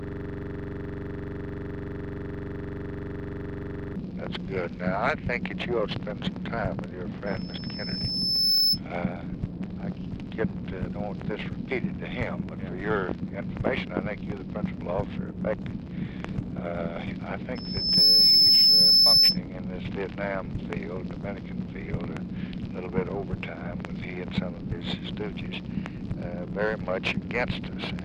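Right from the first instant the clip is already stuck in a system hang loop, running until 3.96 s. The machine or its driver froze while the sound hardware kept replaying the same ring buffer, so one 42.67 ms slice repeats exactly, roughly ninety times over. That slice length fits a 2048-sample buffer, and cycling it at 23.4 Hz gives a rough, steady buzz rather than a slower stutter.

Then there's a loudspeaker feedback squeal, twice. The first runs from 7.26 to 8.80 s and the second from 17.55 to 19.39 s. Both times the mic is hearing the speaker it feeds, and at 5.2 kHz the loop gain tips past one, so that tone feeds on itself. The first swells over about a second and a half to around 10 dB above the program. The second shoots up in about half a second and peaks near 15 dB above it, a sharp high whistle.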